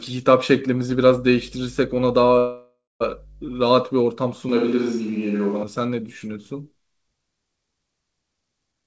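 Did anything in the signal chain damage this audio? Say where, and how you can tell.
Yes. From 0.90 to 3.63 s a steady 50 Hz mains hum sits about 25 dB below the speech, pointing to a ground loop in the analogue wiring. Its fixed pitch sets it apart from broadband hiss.

From 2.38 to 3.02 s a call audio freeze stretches the last sound and leaves about 0.21 s of silence. The speech then resumes where it stopped, with nothing missing. That separates it from a packet loss dropout and points to a likely network stall draining the buffer.

Between 4.49 and 5.63 s the speech turns hollow and roomy, with room noise about 30 dB down but no change in level. The sudden onset and return point to a likely switch to a distant microphone, not added reverb.

At 8.72 to 8.84 s a jitter buffer speed-up cuts about a tenth of a second, so the sound runs at 181% speed without any pitch rise. That rules out a playback-rate error. 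The call codec's band limit at 8 kHz is also audible.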